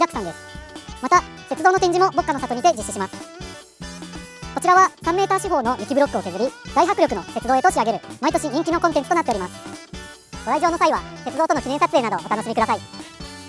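From start to finish the samples are being clocked out faster than they were captured, with no rate conversion in between, the classic wrong sample rate fault. The speed-up is 1.5 times, which fits material recorded at 16 kHz being played at 24 kHz. Because timing and pitch are tied to the same clock, everything moves together: the audio runs hurried and compressed in time, and it sits about 7 semitones higher, giving a thin, chipmunk-like brightness.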